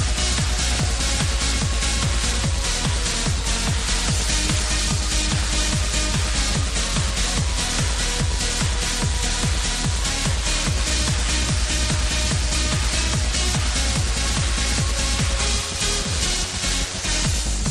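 Throughout, the audio sounds dull and gurgling, with a grainy edge and upper detail that seems to flicker in and out. This points to MP2 compression, likely at a low rate; the damage is plainly audible and fits something around 80 kbps. Layer II divides the spectrum into 32 sub-bands and shares out a limited bit budget, so upper bands drop out and the remaining ones are coarsely quantised.

From 4.11 to 4.28 s a short burst of burbling sits over the sound. This is DAB burbling. Reception errors, at a rate of roughly a tenth of a percent, slipped past error correction into the MP2 data, corrupting samples across eight frames. Wrong samples put short blips of noise into single sub-bands.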